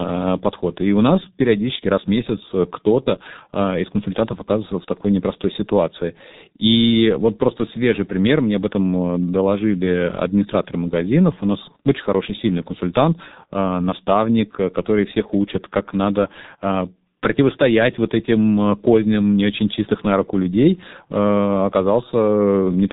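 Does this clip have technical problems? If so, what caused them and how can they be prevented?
Yes. G.723.1 codec damage runs throughout the speech: nothing above about 3.8 kHz survives, and the coarse 30 ms frame modelling leaves it muffled and hoarse with smeared consonants, which fits a bitrate around 6 kbit/s. Prevent it by recording locally or using a wideband codec.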